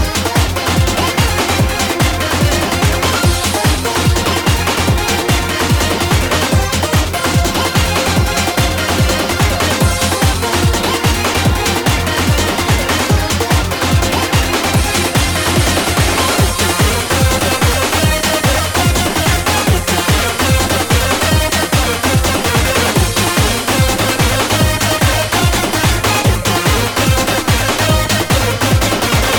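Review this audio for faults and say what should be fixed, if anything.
Nothing in this audio needs fixing. No fault can be heard anywhere in it.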